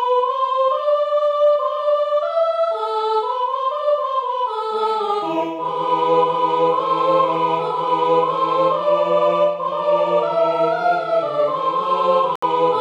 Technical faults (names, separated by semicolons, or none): corrupt frame muted